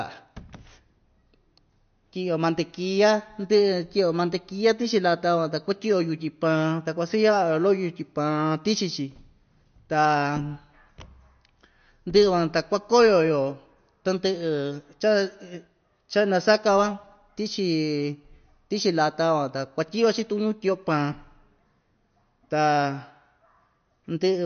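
Speech, and it carries plainly audible MP3 compression from start to finish: nothing above 6.5 kHz, so sibilants sound dull and clipped, with a watery, swirly texture as weak frequency lines flicker between frames. That's likely a low-bitrate encode, consistent with something around 48 kbps.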